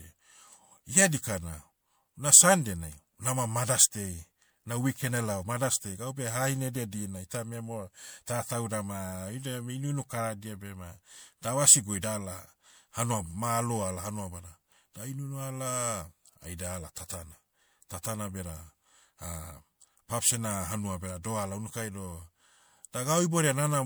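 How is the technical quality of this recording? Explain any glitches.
The quality is compromised by one problem throughout: generation loss. The speech sounds swirly, hollow and smeared, with blurred attacks. That likely comes from repeated MP3 encoding, around four passes, each adding fresh noise and spectral holes.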